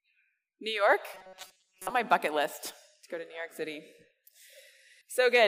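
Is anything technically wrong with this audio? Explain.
Yes. From 1.14 to 1.91 s the audio turns into robotic sound from repeated short buffers. It becomes a rigid, metallic buzz pitched at 188 Hz that still loosely tracks the underlying sound. The likely cause is audio arriving too seldom. The software keeps replaying a tiny slice of about 5.3 ms, one period of 188 Hz, while the real material is skipped. Roughly 70% of this stretch is repeated audio.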